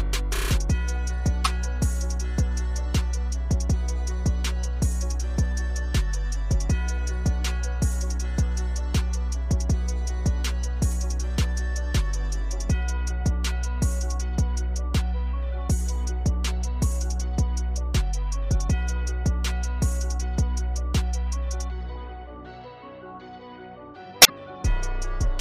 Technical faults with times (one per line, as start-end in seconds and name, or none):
1.45-1.47 damaged data in a compressed stream
24.20-24.30 damaged data in a compressed stream